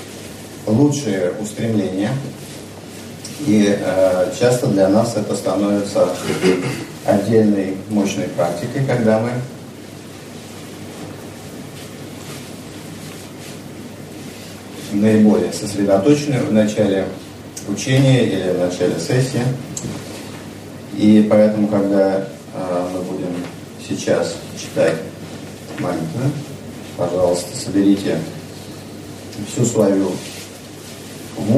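No technical faults can be heard anywhere in this audio. There is nothing here that needs a timestamp or an explanation.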